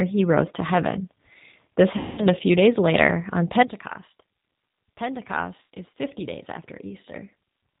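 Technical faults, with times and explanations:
Throughout, G.729 codec: The speech sounds slightly rough and synthetic, with nothing above 4 kHz and plainly audible coding damage. That fits an 8 kbit/s G.729A stream. The codec rebuilds each 10 ms frame from a vocal tract filter, a pitch predictor and a handful of pulses rather than the actual waveform, so fine detail and brightness are lost and background sound takes on a warbling texture.
1.97–2.27 s and 5.70–5.76 s, VoIP packet loss concealed by the speech codec: Just before "a few days later" the sound smears into a stretched buzzy tone or coloured noise that fades. At 5.70 s a shorter patch does the same. The first gap covers about 210 ms, which fits seven lost 30 ms packets. The second covers about 90 ms, which fits three. The decoder kept extrapolating its last pitch and filter with falling gain. Because each frame builds on the previous one, the voice stays weak briefly after packets resume.
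3.63 s to the end, sudden gain jump: Right after "few days later on" the whole signal, voice and background together, drops by about 12 dB in a single step with no fade and stays at that lower level to the end. The abrupt switch from one sample to the next likely comes from a digital gain setting or bit shift applied without a ramp, so the level change is instant rather than gradual.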